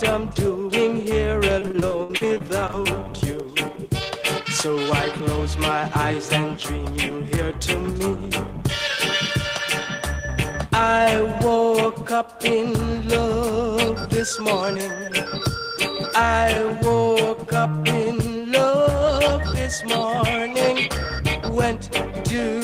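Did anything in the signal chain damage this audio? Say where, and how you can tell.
Yes, at the network stage. Between 1.59 and 2.87 s the audio turns choppy, with a rapid run of short holes, the longest about 61 ms. This is repeated packet loss: packets went missing or arrived too late, one after another. The receiver covered each hole by continuing the last sound it had, about 353 ms of patched audio in total, roughly 28% of that stretch, and about 300 ms of material is simply gone.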